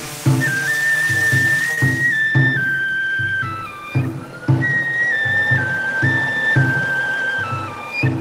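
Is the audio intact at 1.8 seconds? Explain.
No. From 1.74 to 1.87 s there is a brief smear and wobble: short concealed packet loss, where about 20 ms arrived too late and the receiver extended the preceding sound to cover the gap.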